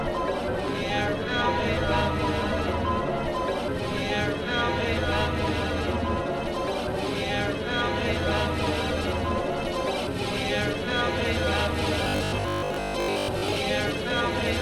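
From 12.04 to 13.56 s, the sound turns into a rigid, metallic buzz. It is robotic sound from repeated short buffers. A fixed pitch of 50 Hz sits on top of everything. That rate matches a 20 ms stretch played over and over. New audio was likely arriving too seldom, so the last fragment was repeated to fill the gaps. Most of the real audio in this span is skipped, though its rough shape still comes through.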